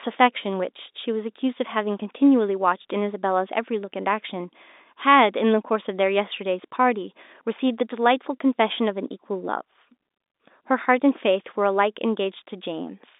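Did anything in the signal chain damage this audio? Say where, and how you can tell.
No, the chain is intact: this is telephone speech over G.711 mu-law, so a band running from 250 Hz to 3.7 kHz with nothing above 3.8 kHz is simply the line's normal limit, not damage.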